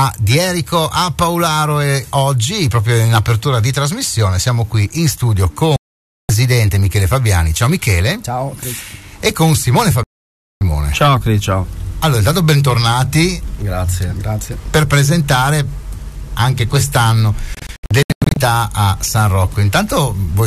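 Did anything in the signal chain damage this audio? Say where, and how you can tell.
Yes, there's a digital broadcast dropout at the reception stage. The sound mutes from 5.76 to 6.30 s and again from 10.03 to 10.62 s, each a clean hole of about half a second. From 17.55 to 18.37 s it breaks into several short holes, none longer than 96 ms. The receiver lost frames or saw checksum failures and muted until good data returned; the gap lengths suggest frames of about 24 ms. Anything broadcast during those holes is gone.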